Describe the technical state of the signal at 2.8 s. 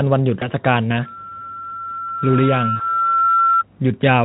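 At 2.8 s two things are going on at once. A loudspeaker feedback squeal is running from 1.05 s to 3.64 s: the mic is hearing the speaker it drives, and around 1.4 kHz the loop gain tips past one, so that tone feeds itself. It swells over roughly two seconds and by this point sits a little louder than the speech.

Right on top of that, 2.76 s to 2.97 s is VoIP packet loss concealed by the speech codec. About 40 ms of audio goes missing, which fits a couple of dropped 20 ms frames. The Speex decoder fills the gap by carrying forward its last pitch and spectral shape at falling gain, so you get a smeared stretch that turns into a buzzy tone or a coloured noise. Because each frame builds on the one before, the speech stays thin and off for a while after the packets are back.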